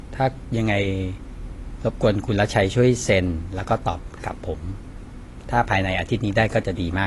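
AAC compression at a low bitrate, likely around 32 kbps, runs throughout: the encoder drops everything above about 11.5 kHz, leaving the speech dull, smeared and plainly warbly or fizzy.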